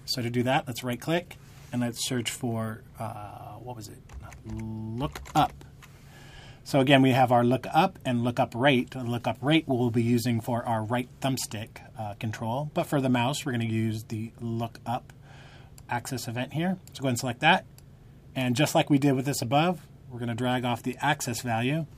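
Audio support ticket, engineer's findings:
Nothing stood out on listening, so no findings to log against this clip.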